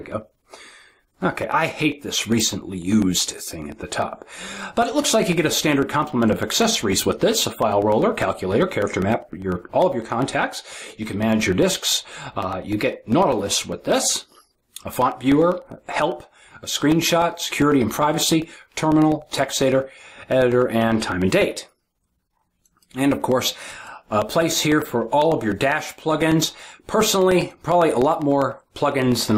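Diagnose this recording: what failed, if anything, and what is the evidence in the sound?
Periodic USB or driver dropouts at the driver or buffer stage: a background task stalls the USB audio path every 0.1 s, blanking roughly a millisecond with silence each time. From 0.12 s to 29.32 s this produces a steady ten-per-second ticking wherever sound is present.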